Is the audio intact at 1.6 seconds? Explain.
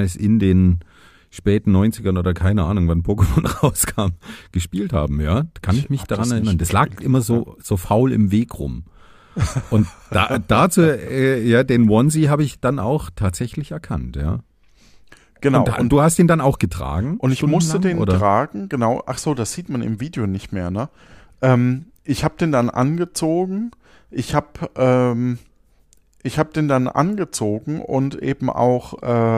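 No. At 1.6 seconds the speech carries sample clock jitter, which runs through the whole clip. The converter's timing wanders by about 0.7 microseconds rms, so each sample lands slightly off its ideal instant, and the resulting error scales with how fast the waveform is changing. It sits roughly 50 dB below the signal and is heard as a faint hiss or grain that thickens on loud, bright passages and disappears in pauses.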